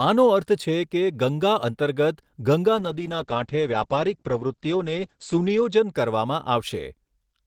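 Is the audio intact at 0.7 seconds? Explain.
Yes, the audio is intact at 0.7 seconds, with no fault audible at that moment.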